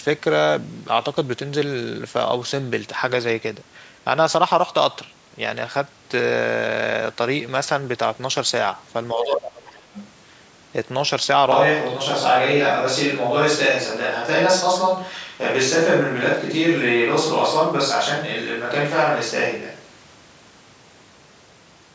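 A speech recording in which, from 9.14 to 9.88 s, the talker's voice sinks and breaks up for most of a second, dropping by roughly 25 dB at its deepest. That is likely speech suppressed in double talk: with both sides speaking, the echo canceller could not tell the talker from the loudspeaker echo and turned everything down. Inside that dip, at 9.21 to 9.26 s, a second voice surfaces at nearly the talker's own level, and again from 9.94 to 10.07 s, much fainter. Both are short scraps of the other side's voice leaking through, likely loudspeaker playback that the echo canceller failed to remove from the microphone. At 11.52 s the voice abruptly turns roomy and hollow, with thinner bass and a room-noise floor around 35 dB below the speech, though its loudness hardly changes. The close sound returns just as suddenly at 20.15 s. This fits a switch to a distant microphone, likely because the close microphone's signal dropped out, and a device further away was recorded instead. 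Throughout, the audio carries the band limit of call microphone processing, with nothing above 8 kHz.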